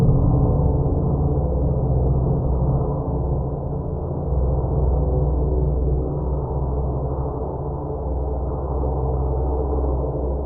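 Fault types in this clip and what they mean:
No faults are audible anywhere in the recording.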